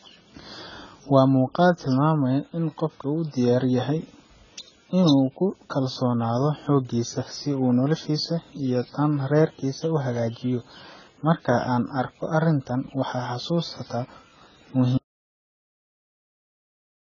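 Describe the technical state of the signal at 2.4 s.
At 2.4 s the speech shows heavy damage that runs the whole clip and likely comes from AAC compression at a low bitrate, consistent with about 16 kbps. Nothing sounds above 7 kHz, and coarse quantisation leaves sibilants smeared, dull and warbling.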